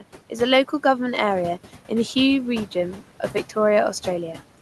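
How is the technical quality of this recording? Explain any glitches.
The recording has one fault, present throughout.

Noise suppressor artifacts, throughout: the suppressor estimates which frequency bands hold steady noise and pulls them down frame by frame, here by about 12 dB. The room noise, about 17 dB below the speech, sinks in the pauses and returns beneath the speech, so the background pumps.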